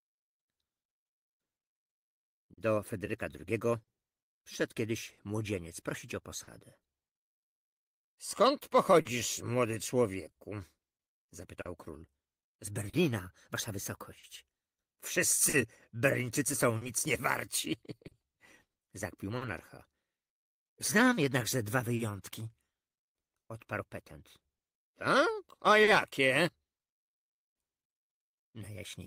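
The audio carries clock drift between sender and receiver for its whole length, with the sender's clock running about 3% slow relative to the receiver's. Because samples arrive more slowly than they are played out, the jitter buffer keeps draining. The receiver has to stretch or repeat short fragments. The result is small timing hiccups recurring at uneven intervals throughout the clip rather than at any single point.

On top of that, scattered short gaps appear between 1.25 s and 28.49 s. There are roughly twenty of them, the longest around 40 ms, and together they amount to about a second of patched audio, roughly 3% of that span. Each one comes from a lost or late packet that the receiver concealed by extending the preceding sound. The content stays continuous, but brief ticks, smears and stutters are spread across the stretch.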